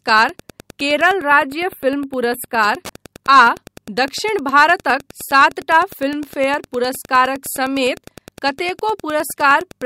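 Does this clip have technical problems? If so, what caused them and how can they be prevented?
Yes. Throughout the clip, a nearby Wi-Fi radio is coupling into the audio circuit, which rectifies its beacon every 102.4 ms and its data bursts. This Wi-Fi interference produces a steady tick about ten times a second under the speech, roughly 25 dB down, plus occasional rasps. Keeping phones, routers and access points well away from preamps and cables, and using shielded leads, prevents it.

From 1.14 to 2.63 s, one channel arrives a few samples late, about 0.07 ms, and the two are summed to mono. This channel delay causes comb filtering, cancelling frequencies at evenly spaced notches starting around 7 kHz, so the speech turns hollow and phasey. Keeping both channels on the same clock and checking mono compatibility prevents it.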